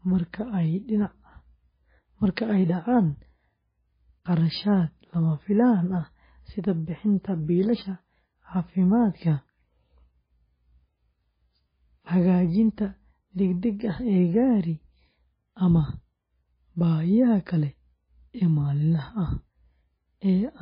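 From start to finish the speech sounds watery and swirly, with a metallic chirping on s sounds, smeared consonant attacks, and a dull top end where nothing reaches above 5 kHz. This is likely MP3 compression at a very low bitrate, something near 16 kbps, with heavy damage. Starved of bits, the encoder chops off the treble at a fixed point and drops weak frequency lines that flicker on and off between frames, producing the swirl.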